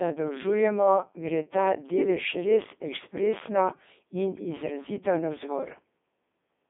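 Throughout, the speech shows heavy Codec 2 vocoder damage, consistent with its 3.2 kbit/s mode. The voice is rebuilt from sine waves using only pitch, voicing, energy and a spectral envelope, so it sounds robotic and buzzy. Spectrograms show stiff harmonic stripes from 200 Hz to 3.6 kHz, empty above 3.7 kHz.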